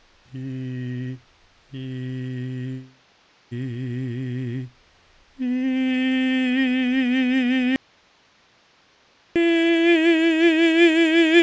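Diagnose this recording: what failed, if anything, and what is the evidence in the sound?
The music drops out to a faint residue from 7.76 to 9.36 s, about 1.6 s. The cut is abrupt, not a fade. Only hiss remains, roughly 40 dB below the music. The stage is likely an upstream analogue connection breaking while the path stayed live, with the call codec's 8 kHz ceiling audible throughout.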